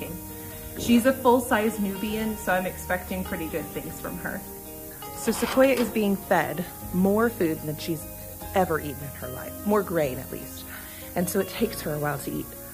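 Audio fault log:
throughout, low bit depth with noise shaping: a steady, thin hiss sits under the whole clip, climbing sharply toward the top of the band, and it is loud, only roughly 10 dB below the signal. The audio is quantised to just 7 bits, so each sample is rounded coarsely, and that rounding error is fed back and filtered so its energy is pushed upward in frequency, leaving the lows cleaner while the highs fill with hiss.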